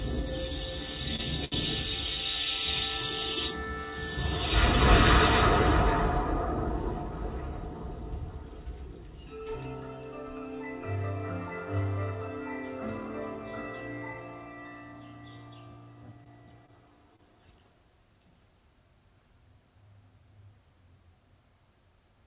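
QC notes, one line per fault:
1.16–1.21 s, short stall from a late packet: a packet arrived late and the jitter buffer emptied, so the last sound is held for about 27 ms, then resumes with nothing lost.
1.45–1.54 s, short stall from a late packet: a later packet left the buffer empty for 70 ms, so the sound hangs before continuing from the same point.
16.24–17.21 s, scattered short gaps: about three packets went missing, none longer than about 30 ms, and each hole was patched by extending the preceding sound, leaving brief ticks and smears.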